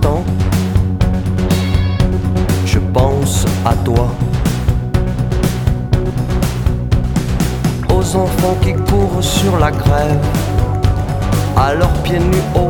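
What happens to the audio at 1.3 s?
Nothing goes wrong at 1.3 s; the audio plays through that moment intact.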